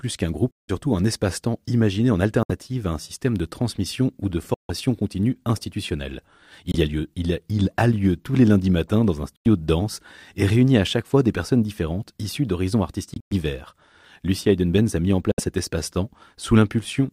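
Short holes cut through the speech at 0.51–0.70, 2.43–2.51 (between "imaginé en" and "à un système de"), 4.54–4.71, 6.72–6.76, 9.36–9.46, 13.14–13.33 (broken into bursts, the longest about 0.11 s) and 15.31–15.40 s. These are likely Bluetooth dropouts: late packets were discarded, so the output fell silent and then resumed as if it had kept playing. On a spectrogram and waveform they show as sharp-edged blank vertical gaps.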